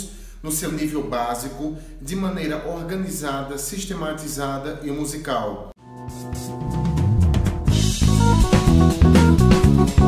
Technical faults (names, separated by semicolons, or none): none